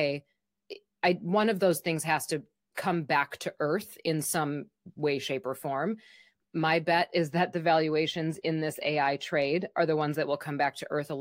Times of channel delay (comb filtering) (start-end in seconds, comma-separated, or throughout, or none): 7.14-10.31